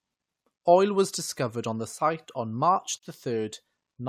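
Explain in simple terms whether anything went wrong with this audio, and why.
A gap at a join of encoded pieces at 2.98 s silences the speech for about 50 ms. Two separately encoded pieces were joined without trimming each encoder's built-in padding.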